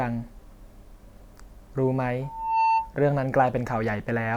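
A microphone picked up the loudspeaker it was feeding, and at 899 Hz the loop gain rose above one, producing a loudspeaker feedback squeal from 2.22 to 2.95 s. The tone swells over a little under half a second into a squeal about 5 dB above the speech.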